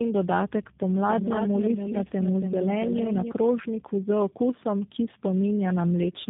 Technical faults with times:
0.00-6.30 tandem speech coding
0.91-3.31 doubled audio track

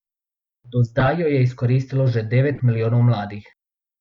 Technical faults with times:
0.99-1.08 corrupt frame decoded
2.53-2.61 corrupt frame decoded

